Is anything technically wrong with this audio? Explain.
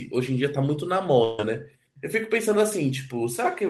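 Yes. From 1.23 to 1.39 s the speech stops moving forward: the last sound is stretched into a sustained buzz or hiss that fades as it goes, and then the talker resumes slightly further along, with a short piece of speech missing. This is a burst of packet loss. About 150 ms of audio never arrived in time, so the receiver's concealment extended the previous sound and attenuated it across the gap before the next packets could be played.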